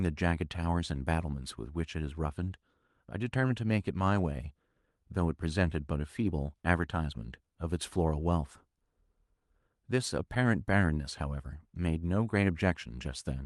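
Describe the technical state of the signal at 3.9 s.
At 3.9 s the speech comes through intact, carrying only the ordinary coding character of the WebRTC call path, whose Opus codec limits the top end to around 12 kHz.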